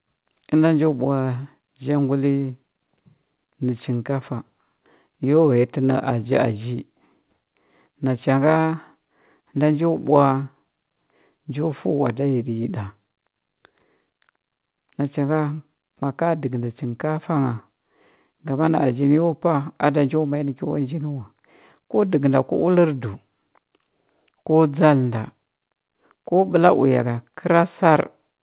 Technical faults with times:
none

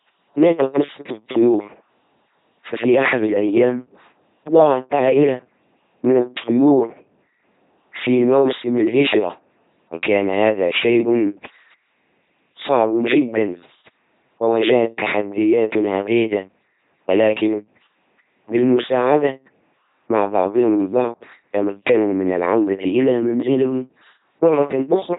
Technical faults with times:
0.00-25.18 LPC-10 vocoder

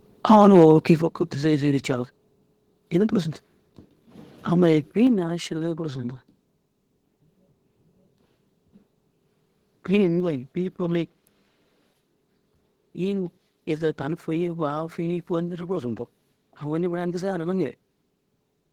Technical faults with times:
1.02 microphone volume stepped down
2.04 microphone volume stepped down
5.07 microphone volume stepped down

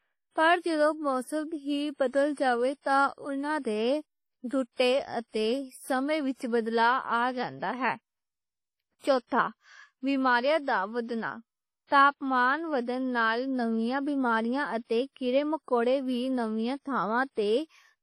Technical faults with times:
0.00-18.02 WMA compression

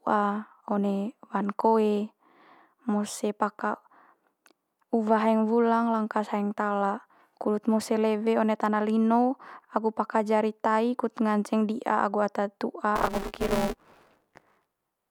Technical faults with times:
12.95-15.11 buffer tearing

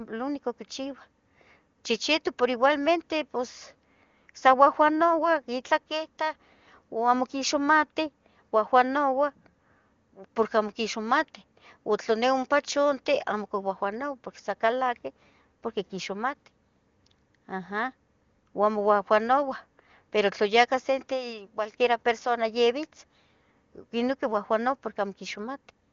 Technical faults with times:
none

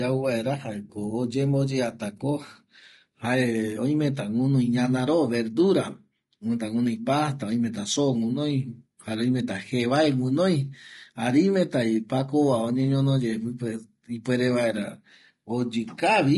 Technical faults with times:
0.00-16.38 low-delay AAC compression

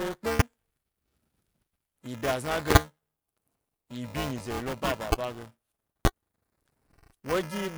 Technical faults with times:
0.00-7.78 buffer tearing
0.39-0.42 loud pop
2.71-2.78 loud pop
5.12-5.15 loud pop
6.05-6.08 loud pop

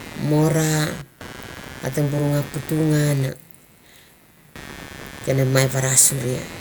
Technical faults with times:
0.00-6.60 computer activity noise

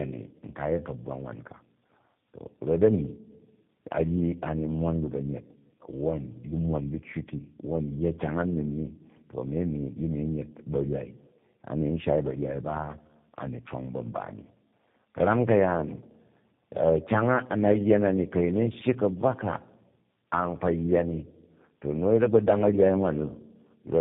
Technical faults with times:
0.00-24.01 tandem speech coding

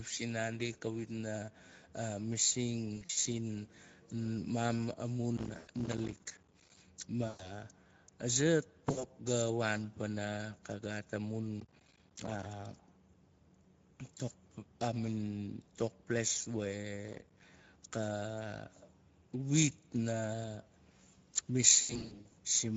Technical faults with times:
0.00-22.77 Speex codec
2.97-3.27 VoIP packet loss concealed by the speech codec
5.37-6.77 processor overload crackle
5.57-5.70 VoIP packet loss concealed by the speech codec
7.27-7.52 VoIP packet loss concealed by the speech codec
8.91-9.06 VoIP packet loss concealed by the speech codec
11.58-12.46 processor overload crackle
17.08-17.42 processor overload crackle
21.75-22.33 VoIP packet loss concealed by the speech codec

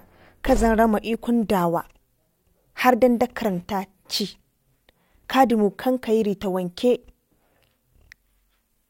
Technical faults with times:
none

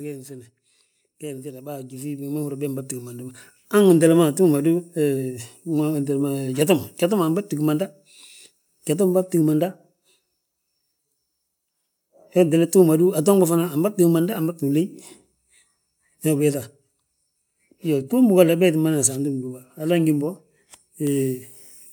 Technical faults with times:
1.20-8.87 automatic gain rising

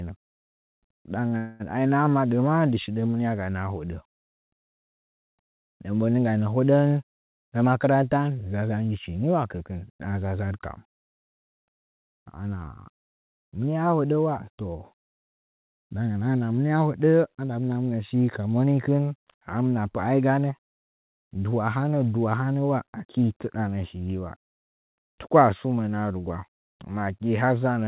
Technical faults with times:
1.28-1.34 short stall from a late packet
1.37-1.63 call audio freeze
7.13-8.92 jitter buffer speed-up

